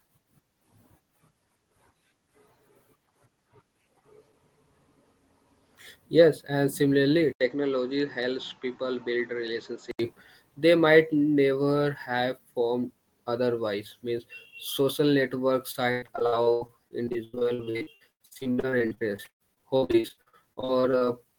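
At 7.33 s, right after "and similarly", the speech goes briefly silent for 80 ms and then comes back duller and boxier, with nothing above 7.3 kHz and a faint new background noise well below the speech. The loudness stays about the same. This lasts until 9.99 s, just before "they might never have". The likely cause is an input switched to a poorer device, a narrower-band microphone or headset with its own noise floor.

From 15.71 s, just after "social network", to 21.08 s, the speech turns choppy, with pieces dropping out. This is repeated packet loss. Audio arrived late or not at all many times in quick succession. About 2 s was patched by stretching out the preceding sound, roughly 37% of the stretch, and about 2 s is simply missing, in gaps of up to 117 ms.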